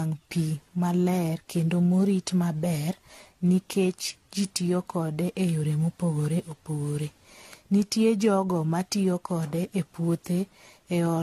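From start to finish the speech carries generation loss: a swirly, watery smear, hollow gaps in the spectrum and softened consonant attacks, with nothing above 14 kHz. The damage is heavier than one AAC-LC pass at a rate that fits 64 kbit/s would leave, which sets it apart from a single low-bitrate encode. The likely cause is re-encoding around seven times, each pass quantising again on a shifted frame grid so errors accumulate.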